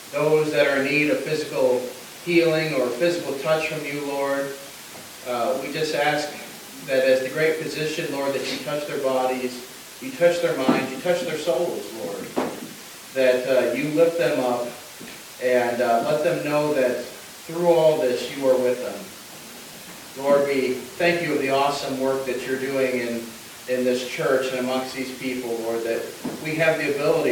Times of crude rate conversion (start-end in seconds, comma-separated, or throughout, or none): 14.04-20.30